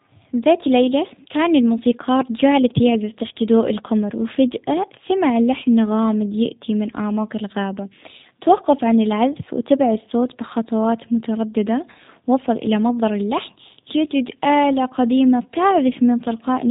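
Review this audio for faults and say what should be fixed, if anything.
G.729 codec damage runs through the whole clip and is plainly audible. Nothing passes above 3.8 kHz, and the speech sounds rough and synthetic, rebuilt each 10 ms frame from a vocal tract filter, pitch predictor and sparse pulses, which fits an 8 kbit/s G.729A link. To prevent it, carry or record the call with a wideband codec such as G.722 or Opus instead.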